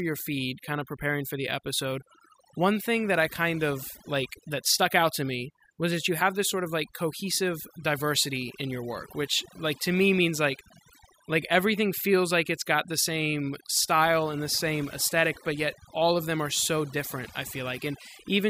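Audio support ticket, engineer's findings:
Overdone noise removal, throughout. Background near-silent with twinkling specks. Denoiser set too aggressive, gating bands near noise estimate, taking quiet speech detail too. Spectrogram: isolated flickering time-frequency blobs in gaps, ragged holes in speech harmonics.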